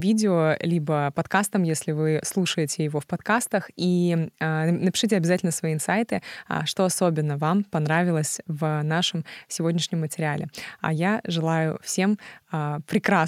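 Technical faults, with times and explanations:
No technical faults are audible anywhere in the speech.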